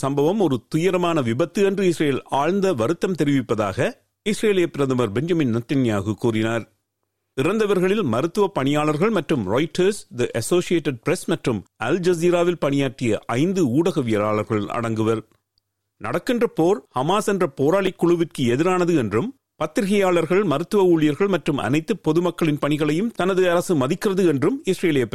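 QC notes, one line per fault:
17.87 s, block of digital silence: about 5.2 ms of audio cuts out with no fade, so the gap is too brief to be heard as silence and comes across as a tick or dip.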